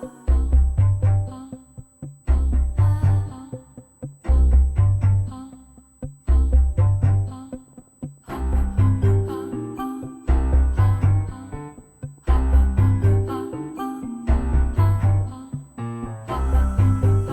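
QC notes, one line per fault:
Throughout: USB whine. A fixed-pitch tone sits at 8 kHz for the whole clip, and it is strongest there. It sits roughly 40 dB below the wanted sound, so it is faint but always present. The pitch matches the 125 microsecond microframe rate of a high-speed USB bus. Its current bursts leak into the audio through shared power or ground. That turns the frame clock into an audible high whine.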